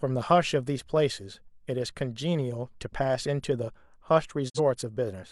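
At 4.48 s a digital broadcast dropout mutes the speech with a 20 ms fade, leaving a flat waveform and blank full-band spectrogram gap until 4.59 s, consistent with one corrupted frame.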